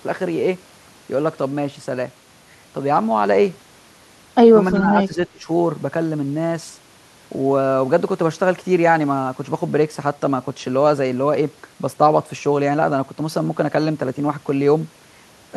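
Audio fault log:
4.76–5.48 s, speech suppressed in double talk: the speech sinks sharply, falling by around 20 dB at its deepest and dipping for about half a second in total. This is likely an echo canceller mistaking the talker for loudspeaker echo while both sides spoke and attenuating everything. On a waveform the envelope pinches in abruptly; a spectrogram shows the energy dimming there.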